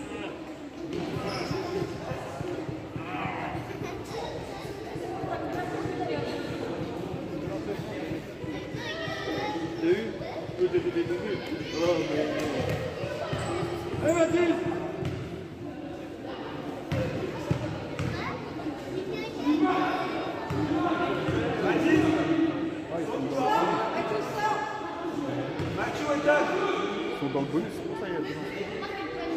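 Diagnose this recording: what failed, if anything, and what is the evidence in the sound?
Nothing failed; no stage shows any audible problem.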